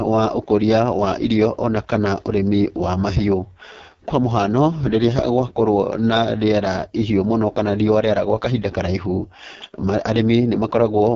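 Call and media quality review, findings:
AMR wideband (HD Voice) codec, throughout. Speech rough, raspy, heavily degraded; nothing above 7.4 kHz. The pulse-driven vocal tract model starves at this rate, consistent with AMR-WB's lowest 6.6 kbit/s mode. Upper band is noise fill, not coded speech. Probable component: network or endpoint codec negotiation.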